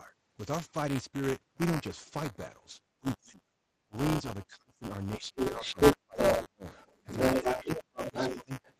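Throughout the sound runs a steady robotic buzz at 188 Hz, which fits a 256-sample buffer. This is buffer tearing. The writing program and the playback hardware have slipped so that they cross inside every period. A small slice of each buffer, a few percent, carries audio from about 10 ms earlier, with hard joins on both sides. The buzz keeps a fixed rate and disappears in silence. Codec coding noise, by contrast, follows the spectrum of the sound and has no regular pulse.

From 3.0 to 3.5 s, from 3.86 to 6.65 s and from 7.39 to 8.55 s, the talker is pushed down hard in pieces, as far as about 30, 35 and 25 dB respectively. These dips are likely speech suppressed in double talk. The echo canceller could not separate the near talker from the loudspeaker echo while both spoke, so it turned everything down. Unlike a dropout or packet loss, the gaps follow the overlap with the other side and do not fall at random.

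From 5.37 to 8.31 s, a second voice comes through at about 5 dB above the talker. It is likely the other side's voice leaking through: the talker's device plays the other side on a loudspeaker, and the echo canceller left part of it in the microphone signal. A brief, faint scrap follows from 8.63 to 8.74 s, about 30 dB down. It lies within the call's 8 kHz band.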